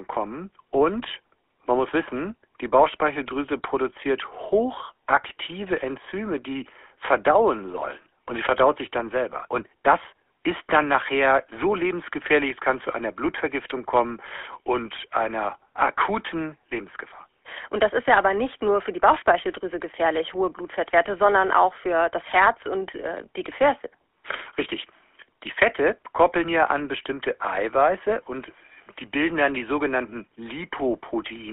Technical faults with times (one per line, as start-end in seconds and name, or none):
0.00-31.53 GSM full-rate codec